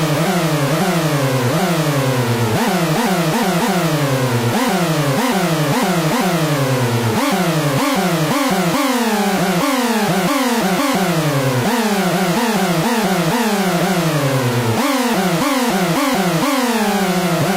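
Nothing stood out on listening to this recording of sounds.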